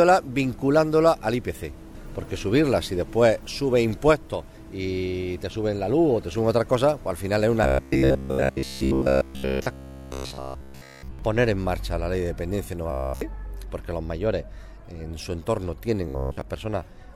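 From 7.64 to 11.19 s, 12.91 to 13.21 s and 16.09 to 16.42 s, robotic sound from repeated short buffers gives a rigid 66.7 Hz buzz, likely from a 15 ms block replayed during late audio.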